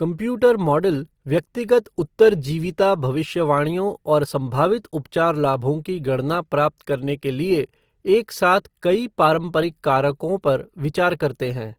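From start to finish, the speech carries plainly audible Opus compression damage, likely from encoding at a rate near 24 kbps in the music-style CELT mode. The bandwidth stays full, reaching up to 20.4 kHz. At this rate the encoder runs short of bits. It keeps each band's energy but fills much of the detail with folded copies of lower bands or with noise. The voice therefore sounds grainy, rough and noisy rather than swirly.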